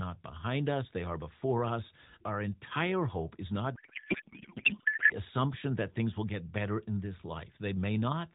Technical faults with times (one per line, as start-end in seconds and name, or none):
3.76-5.13 codec payload misread